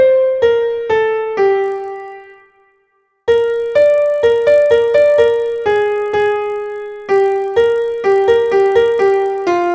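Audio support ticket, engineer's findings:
Buzz at about 50 Hz from 1.62 s to end, present only with signal. Resampler restarted on every block. Rate fits 20 ms blocks, each converted alone (24 kHz to 16 kHz stage), leaving a small error at every block edge.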